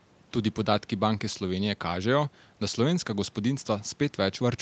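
Speech with no technical faults, carried over a call path whose content stops at about 8 kHz, consistent with a wideband Opus setting, and whose microphone high-pass trims only the lowest bass.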